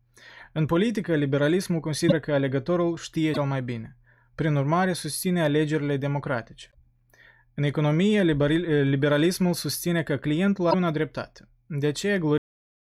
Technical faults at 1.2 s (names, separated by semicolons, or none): none